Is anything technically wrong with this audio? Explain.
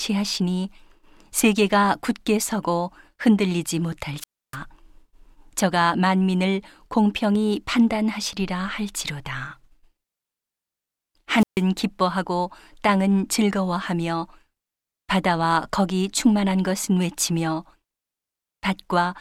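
Yes, there are two wireless microphone squelch dropouts in the speech, at 4.19–4.57 s and 11.36–11.63 s. The radio link fades, hiss rises briefly, then the receiver's squelch mutes the output for about 300 ms and 140 ms respectively before the signal returns.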